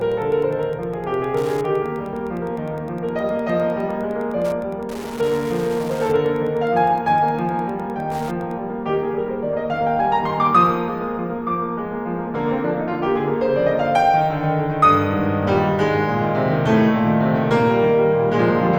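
Wi-Fi interference runs from the start of the music to 8.55 s. A Wi-Fi radio sitting close to the audio circuitry sends a beacon every 102.4 ms, and the circuit rectifies each burst into the signal path. The result is a steady, regular ticking at just under ten clicks per second, sitting about 25 dB below the music. It is faint but mechanical and evenly spaced, and it stops cleanly at 8.55 s.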